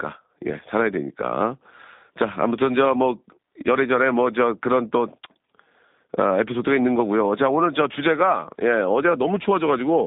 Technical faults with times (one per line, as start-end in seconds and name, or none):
0.00-10.06 G.729 codec